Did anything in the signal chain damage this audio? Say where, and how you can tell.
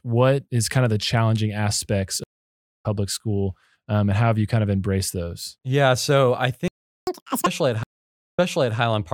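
Yes. Stream reconnect, network stage, 2.24–2.86 s and 7.83–8.79 s: after "of the challenging aspects" a 0.58 s gap ends about 0.4 s ahead, at "school um and how". Later, a 0.49 s gap restarts 0.47 s early, repeating audio.

Playback stall, buffer stage, 6.68–7.07 s: after "so I" the speech halts for 0.39 s, likely a buffer underrun or blocked player thread, then continues.

Catch-up at higher speed, playback stage, 7.07–7.46 s: the backlog plays at 2x speed, pitch raised roughly ten semitones, as the resampler recovers the lost time.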